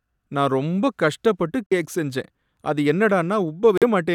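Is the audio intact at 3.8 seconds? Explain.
No. From about 3.78 to 3.83 s the speech drops out into silence, then picks up further along, as if it kept playing. That's a Bluetooth dropout, most likely a couple of audio packets arriving too late and being discarded.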